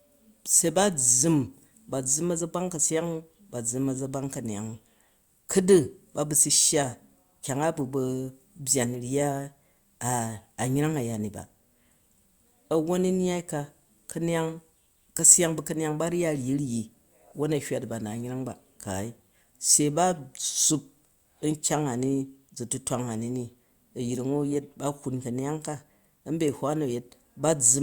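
No technical fault can be heard anywhere in the recording. There are no events to place on the timeline.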